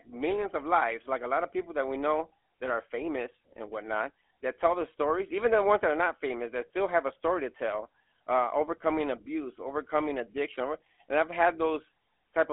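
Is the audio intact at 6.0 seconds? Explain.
No. At 6.0 seconds the speech carries GSM full-rate codec damage, present throughout. Pulse-driven vocal-tract modelling, consistent with the 13 kbps GSM codec, leaves a buzzy, gravelly roughness. A clean telephone band-limit to 250 Hz–3.4 kHz would only sound thin, and here nothing passes above 3.7 kHz.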